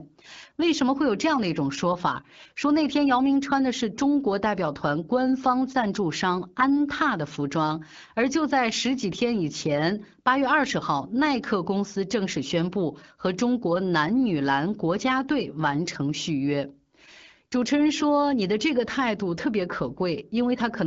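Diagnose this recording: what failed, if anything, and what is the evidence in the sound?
Nothing failed; no fault is audible in this speech.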